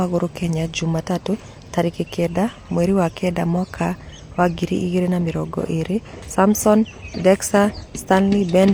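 Nothing here sounds wrong at any point; the speech runs along without a single glitch or hiccup to point to.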